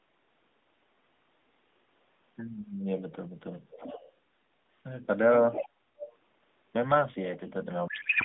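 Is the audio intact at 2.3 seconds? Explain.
Yes, the audio is intact at 2.3 seconds, with the speech passing through the narrowband mobile codec's telephone band of roughly 200 Hz to 3.6 kHz without any fault at that point.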